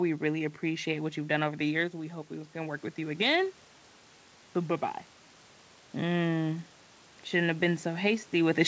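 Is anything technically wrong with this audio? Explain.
Yes: automatic gain rising from 1.91 to 3.47 s. After the talker moves back around 1.5 s, the control lifts its gain about 5 dB over this stretch, so the room noise swells along with the voice, which a talker moving alone would not cause.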